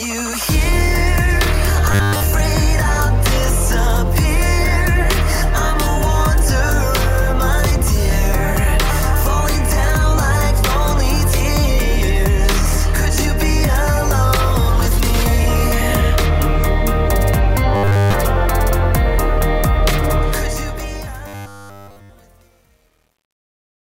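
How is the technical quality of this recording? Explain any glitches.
The recording has two kinds of fault: three brief robotic buzzes and a gritty fade at the end.

Robotic sound from repeated short buffers appears at 1.92 to 2.23 s, 17.75 to 18.14 s and 21.28 to 22.10 s. The likely cause is audio arriving late, so playback repeats a 10 ms slice to fill the gap. That repetition imposes a fixed 100 Hz buzz. The first burst is mostly repeated material, and the later two are entirely repeated. A spectrogram shows evenly spaced horizontal harmonics at multiples of 100 Hz, and the waveform shows identical repeating cycles.

Truncation distortion on a fade runs from 20.18 s to the end. The fade-out starts near 20 s and runs to the end at 23.9 s, but the volume stage keeps only 9 bits with no dither. As the level drops, the waveform collapses into coarse square steps, and the sound turns gritty. 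This is worst from 21.41 s to 23.9 s. On a waveform the tail looks staircase-like, and a spectrogram shows broadband hash.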